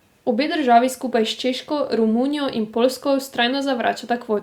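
No technical faults occur at any point in the recording.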